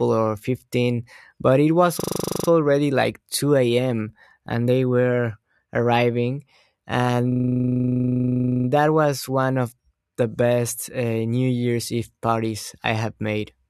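From 2.0 to 2.48 s and 7.32 to 8.68 s, a system hang loop replays one frozen 40 ms buffer. It makes a 25 Hz stutter that shows as identical repeating waveform blocks and evenly spaced vertical spectrogram stripes.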